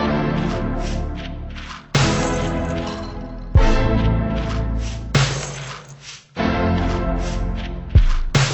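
Throughout, a stereo stream read as mono plays its interleaved left and right samples in sequence, so everything runs at 0.5x speed, a full octave low, with a faint mirrored image in the upper spectrum.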